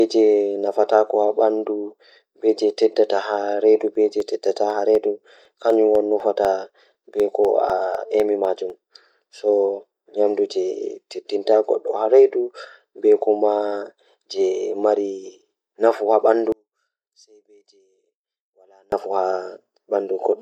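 From 3.95 s to 8.7 s the speech carries periodic USB or driver dropouts: every 0.25 s a sliver of roughly half a millisecond goes silent, about twenty times, giving steady ticks. The waveform shows tiny flat gaps; the spectrogram shows thin vertical broadband lines.

Between 16.52 s and 18.92 s the speech falls by about 36 dB to a faint residue, the likely result of one channel inverted, so centred content cancels in the mono sum. The waveform collapses to a narrow band, and the spectrogram darkens.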